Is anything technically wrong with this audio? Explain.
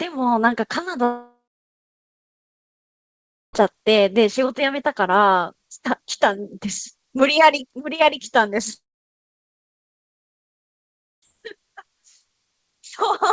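Yes. At 1.04 to 3.55 s and 8.73 to 11.34 s, the sound breaks off. A short fading buzz follows, then about 2.2 s and 2.4 s of near-silence. Each gap is a likely long network dropout: the receiver concealed the missing audio and resumed later, minus roughly 2.5 s. Audio above 8 kHz is absent, consistent with a G.722 call path.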